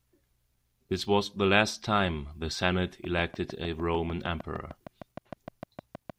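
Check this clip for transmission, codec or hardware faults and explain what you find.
One fault is present: a train of clicks in the second half. From 3.04 s to 6.11 s, a steady ticking of around twenty near-identical clicks runs at 6.55 per second, peaking a few decibels above the speech and continuing through pauses. Likely cause: periodic interference from nearby equipment or a faulty connection or power supply.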